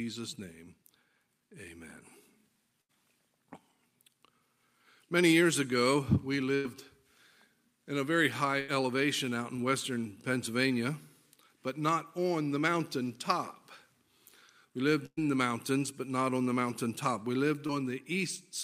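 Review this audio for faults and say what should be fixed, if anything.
Burst of packet loss occurs four times: 2.81–2.91 s, 6.55–6.66 s, 8.60–8.70 s and 15.06–15.19 s. Runs of packets totalling about 80, 100, 80 and 120 ms failed to arrive in time, so the receiver extended the last sound and faded it down to cover each gap. Each one is heard as a held buzz or dying hiss, after which the audio jumps ahead with that stretch gone. The longest, at 15.06 s, fades all the way to silence for about 50 ms before the sound returns. Enabling forward error correction or redundant packets and a larger, adaptive jitter buffer would let the receiver recover bursts like these instead of concealing them.

Short concealed packet loss occurs twice, at 9.56–9.60 s and 17.67–17.71 s. Each time, about 20 ms of audio did not reach the decoder in time. The receiver patched the gap by continuing the preceding sound and then crossfaded back into the real signal. 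The result is a brief smear or wobble. Stabilising the network path to reduce jitter, with in-band error correction as a backstop, would prevent these isolated drops.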